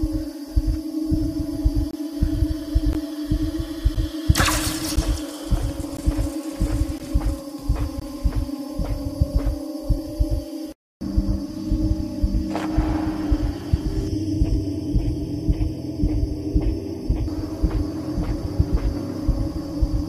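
From 1.91 to 1.93 s, then at 2.93, 3.95, 4.96, 5.97, 6.98 and 8.00 s, gaps between stream segments cut hard-edged silences of about 11 to 24 ms into the sound. Their one-second spacing points to mistimed segment boundaries that the player fills with silence.

Between 14.08 and 17.28 s, channel delay causes comb filtering. One channel lags by a fraction of a millisecond before the mono sum, so shared content cancels at evenly spaced frequencies starting around 1.5 kHz, making the sound hollow and phasey.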